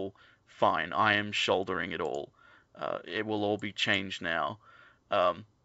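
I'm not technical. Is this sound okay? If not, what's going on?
Yes, nothing wrong can be heard in this recording.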